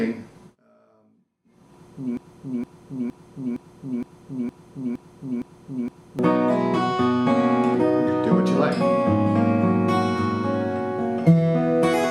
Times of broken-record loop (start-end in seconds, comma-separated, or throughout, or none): 2.17-6.19